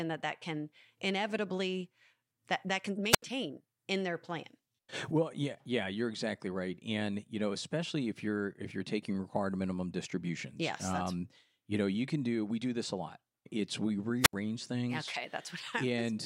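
At 3.09 s, just after "inevitably that that can", the speech suffers a wireless microphone squelch dropout lasting to 3.22 s: the FM radio link fades, hiss swells briefly, then the receiver's squelch mutes the output for about 77 ms before the voice returns. The same happens from 14.21 to 14.34 s, with a mute of about 73 ms. Unlike a digital packet-loss gap, each silence is preceded by a rise of static.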